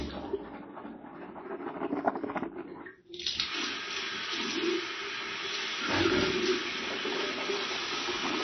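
From start to finish the whole clip carries plainly audible MP3 compression damage. Nothing gets through above 6 kHz, so the top end sounds dull and boxed in, and there's a watery, swirly quality as weaker detail flickers in and out from one frame to the next. That's likely an encoder starved of bits, dropping the treble and zeroing faint components, which fits a very low bitrate around 24 kbps.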